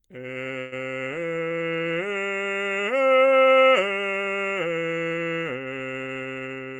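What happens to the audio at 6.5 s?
From 6.45 to 6.75 s the music undergoes a jitter buffer speed-up: the receiver trims repeated pitch-period-sized slices, about 40 ms in total, playing roughly 10% faster. The tempo briefly rushes while pitch stays put, which separates it from a sample-rate mismatch that would raise pitch too.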